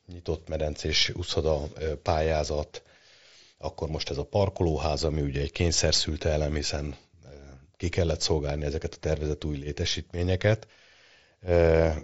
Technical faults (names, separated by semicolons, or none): none